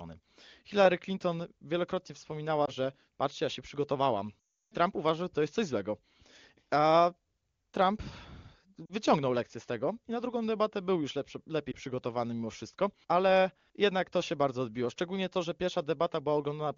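Lost AMR speech frames occur four times. At 2.65–2.71 s, just before "że patrzcie ja się", one 20 ms frame goes missing and the decoder bridges it by reusing the previous pitch and vocal tract settings, giving a brief dip or warble. The longest gap is 4.40–4.74 s, about 320 ms of lost frames. The decoder's gain falls away within roughly two frames, so the speech drops to near silence for the rest of the gap, and the speech comes back weak or rough for a moment. At 8.86–8.93 s, before "lekcję z tego i", about 40 ms is lost, and at 11.71–11.76 s, between "debatę był już lepszy" and "przygotowany mimo wszystko ale", a single 20 ms frame goes missing. Both produce short dips.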